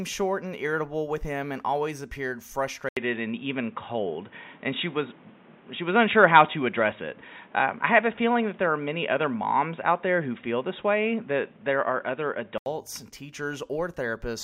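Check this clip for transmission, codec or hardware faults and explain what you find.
One fault is present. Input switched to a poorer device, from 2.89 s to 12.66 s, just after "him and always appeared". The sound likely moves to a narrower-band microphone or headset call profile. After an 80 ms gap, the speech turns boxy, with nothing above 3.8 kHz. The level shifts by roughly 5 dB, and a new noise floor sits about 30 dB below the speech.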